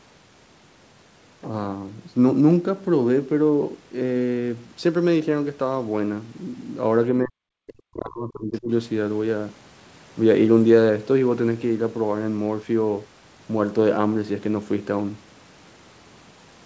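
From 7.22 to 8.7 s the speech is suppressed in double talk: the talker's level collapses, at its deepest by roughly 40 dB. This is likely the echo canceller failing to separate the talker from the overlapping loudspeaker echo and attenuating both on the near-end path.

Inside that span, the other side's voice leaks through twice, at 7.69–7.73 s and 8.54–8.59 s, as short bursts sitting roughly 25 dB and then 35 dB under the talker. The likely cause is residual loudspeaker echo the canceller failed to subtract.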